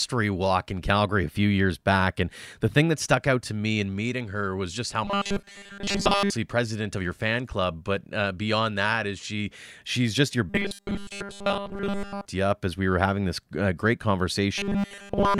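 Robotic sound from repeated short buffers at 5.05 to 6.31 s, 10.50 to 12.26 s and 14.58 s to the end: speech becomes a rigid 200 Hz buzz, likely from a 5 ms stretch replayed while real audio was skipped, for most of the first span and all of the later two.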